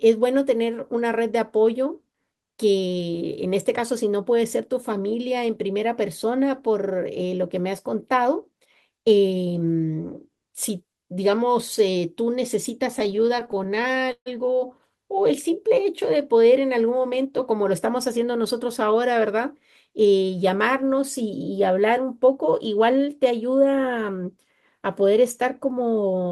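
From 12.99 to 14.28 s the speech drags and stutters through twenty brief stalls, the longest 142 ms: repeated stalls (stutter), as late packets emptied the jitter buffer, and continued sound filled about a quarter of that span. From 16.96 to 17.33 s the speech sounds hurried at unchanged pitch, running at 117%: a jitter buffer speed-up, trimming roughly 70 ms of excess buffered audio in short pitch-period cuts.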